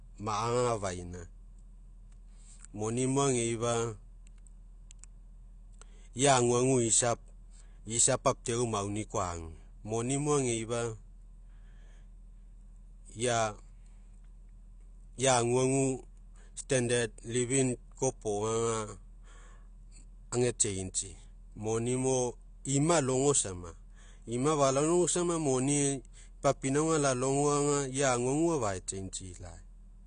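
Throughout, the speech sounds dull, with nothing above 9.8 kHz. Sibilants warble and smear. The likely cause is AAC compression at about 32 kbps.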